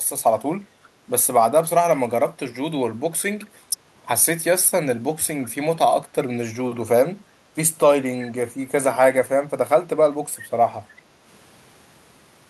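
An echo canceller at the far end likely let some of its loudspeaker pickup through, so an echo leak returns faint, brief copies of the speech 363 ms late, at 3.42 to 3.46 s, 5.45 to 5.49 s, and louder at 8.20 to 8.25 s.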